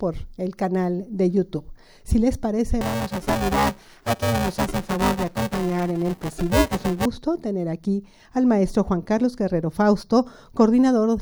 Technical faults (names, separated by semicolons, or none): buffer tearing